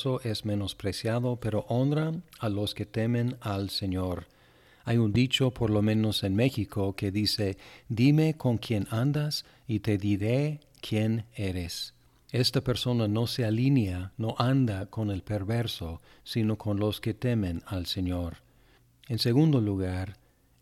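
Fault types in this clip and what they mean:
Loud pop: One sharp pop sits on the speech from 5.15 to 5.17 s, just before "por lo menos en". It peaks roughly ten decibels above the speech, which continues underneath. This is likely a sudden electrical pulse added to the signal.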